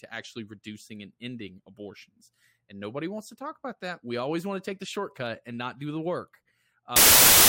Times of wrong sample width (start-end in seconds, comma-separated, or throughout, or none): 6.96-7.48